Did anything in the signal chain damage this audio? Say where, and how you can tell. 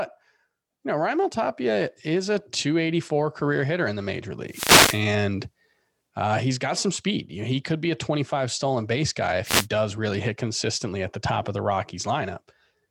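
Yes. The damage comes from the analogue radio link of a wireless microphone, ahead of the converter. There are two wireless microphone noise hits, from 4.49 to 5.03 s and from 9.44 to 9.67 s. Each is a short swish of static that sweeps over the speech and then clears. The FM carrier fades when reflected paths cancel at the receiver. With less signal, receiver noise rises through the demodulated audio until the carrier recovers.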